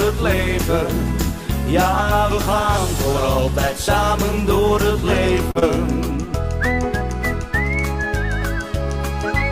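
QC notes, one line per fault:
5.51–5.57 s, short stall from a late packet: A packet was not available when due, so the jitter buffer ran dry and the receiver held the last sound for about 38 ms until the packet arrived. Playback then resumed from the same point, so no audio is lost, but the held sound runs long with a faint buzzy or dipped texture. The end-to-end delay is also 38 ms longer from here on.
5.59–5.64 s, short concealed packet loss: About 20 ms of audio never reached the decoder in time. The receiver covered the gap with roughly 24 ms of synthesised continuation, extending the preceding sound's pitch or shaped noise and then crossfading back into real audio. The result is a brief smear or wobble just after the stall. A short transient in that span can disappear entirely.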